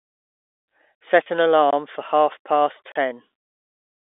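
At 1.23 s a network packet failed to arrive, and the receiver's packet loss concealment with pitch repetition covered the gap by repeating the last pitch period for about 30 ms, which fits a single lost packet. It is heard as a brief, slightly held, buzzy stretch of the sound before normal playback resumes at about 1.26 s.

Twice a block of digital silence replaced the audio. The first, at 1.71 s just before "for half past", lasts about 21 ms, which fits a 1024-sample buffer. The second, at 2.92 s just after "for half past", runs about 36 ms. Each cuts hard to silence and back with no fade, and each gap sounds like a short hole. Underneath, the G.711 telephone coding keeps the sound within the narrow phone band of about 300 Hz to 3.6 kHz.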